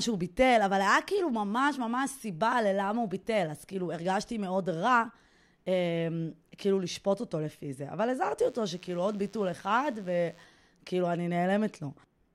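DECT cordless phone buzz runs from 8.44 to 10.44 s beneath the speech. A nearby DECT handset or base emits a radio burst every 10 ms, which the audio circuitry rectifies into a thin, steady 100 Hz buzz rich in harmonics, sitting about 30 dB below the speech.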